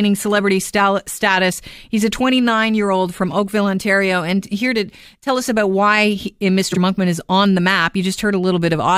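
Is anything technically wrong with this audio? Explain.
Yes, there's one glitch. At about 6.71 to 6.78 s, frames are out of order: two neighbouring blocks of roughly 23 ms each get swapped, so the speech flutters briefly.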